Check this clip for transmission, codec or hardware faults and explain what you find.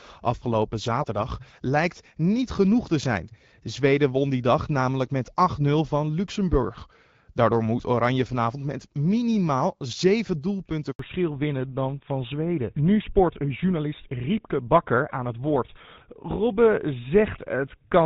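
Two transmission faults show up, both at about 11 s, where the call changes network and then stays in a lower-quality mode until the end.

Handover gap, 10.91 to 10.99 s: the call was passed from one network to another and no speech frames arrived during the switch. The voice dies away within a few tens of milliseconds and stays silent for about 80 ms until the new link picks up, so whatever was said in that moment is lost.

Fallback to narrowband, from 10.99 s to the end: after the handover the call dropped from HD Voice to an older narrowband codec. Nothing above 4 kHz survives, so the speech loses its crispness and turns duller and rougher, consistent with a switch from AMR-WB at about 12.65 kbit/s to GSM full rate.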